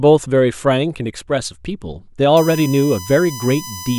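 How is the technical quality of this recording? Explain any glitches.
The recording has one clear fault, a USB whine in the last part of the clip.

From 2.37 s to the end, current drawn by the USB bus in 1 ms frames leaks into the audio through power or ground. It adds a steady, fixed-pitch whine built on 1 kHz harmonics, strongest at 6 kHz, roughly 15 dB below the speech.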